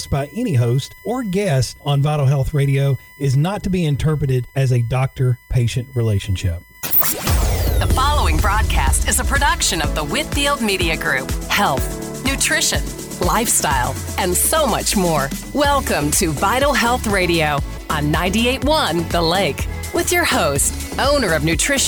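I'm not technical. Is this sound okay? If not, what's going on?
No. Throughout the whole clip there is a thin, steady whine sitting behind the sound, faint but constant, with a fixed pitch that never moves. This is USB whine. A USB connection draws power in regular pulses a thousand times a second, and those pulses leak into the audio through the power or ground wiring. That is why the whine is built on a 1 kHz tone, with its strongest part an octave higher at 2 kHz.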